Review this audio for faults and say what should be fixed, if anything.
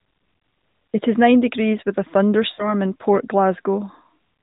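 Radio errors corrupted AMR speech frames, so the decoder repeated the last good frame at falling gain. There are two events of lost AMR speech frames: a brief dip at 0.38 to 0.40 s, consistent with one lost 20 ms frame, and a fading smear from 2.54 to 2.75 s just after "nine degrees with a," suggesting about 40 ms lost. To prevent it, strengthen the radio link's error protection or add redundancy so frames pass their checksum.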